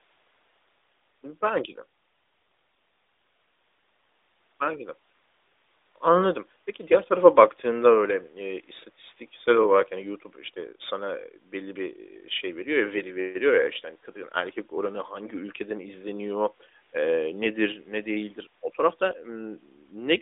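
Nothing in this speech recording points to a technical fault; it's a straightforward listen with no dropouts, glitches or other trouble to report.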